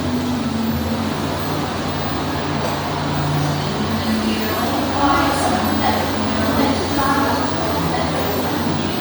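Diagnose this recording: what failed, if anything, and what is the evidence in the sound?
The codec stage is where this went wrong. Across the whole clip the top end sounds grainy and hissy rather than clean, with a breathy texture laid over the sound. That's likely Bluetooth LC3 compression: the encoder drops upper-band detail and fills it with noise, which fits about 48 kbps with 10 ms frames.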